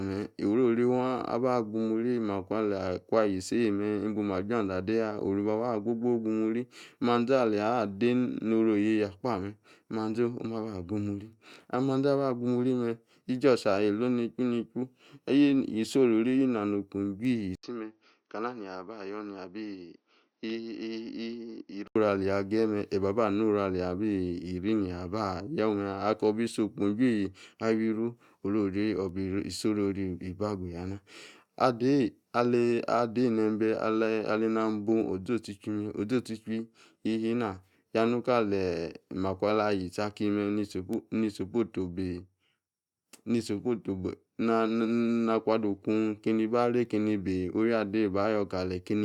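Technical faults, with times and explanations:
17.55–21.96 s, input switched to a poorer device: after an 80 ms gap the speech goes dull and boxy, with nothing above 6.4 kHz, roughly 5 dB quieter, and a faint new hiss underneath. That's likely the recorder hopping to a lesser microphone, then switching back.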